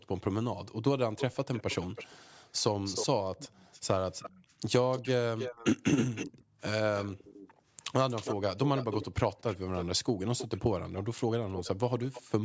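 Speech on a call, with a delayed double of the talker trailing about 314 ms behind throughout much of the clip: from 1.18 to 2.17 s it sits roughly 15 dB under the direct speech, then about 10 dB under from 2.84 to 9.85 s and again from 10.38 to 12.22 s. This is an echo leak, likely caused by a far end playing the call over a loudspeaker while its echo canceller fails to strip all of that sound from its microphone, so the residue returns here. Separately, the room background briefly dips or vanishes in short pulses: about 40 dB at 0.0 to 0.09 s, about 12 dB at 3.58 to 3.63 s, about 9 dB at 4.49 to 4.57 s, about 40 dB at 6.44 to 6.6 s, and about 16 dB at 7.48 to 7.67 s, each lasting roughly 40 to 200 ms. That is background gated by the echo canceller, which clamps the microphone hard during loudspeaker playback and then releases it. The band stops at 8 kHz, as expected from the call's microphone processing.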